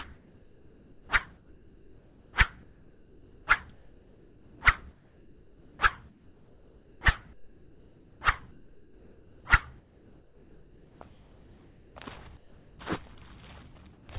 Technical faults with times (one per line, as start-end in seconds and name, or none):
0.04-12.79 comfort noise in place of the background
13.93-14.09 comfort noise in place of the background